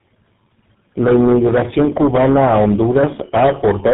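From start to finish the speech carries tandem speech coding: it sounds like it crossed several low-rate speech codecs in a row, probably four, with a GSM full-rate stage most likely among them, each one re-encoding the previous one's damage. You get a gritty, buzzy roughness, a warbly, swimmy texture, and a muffled top end, with nothing above 3.8 kHz, noticeably worse than a single narrowband codec would leave it.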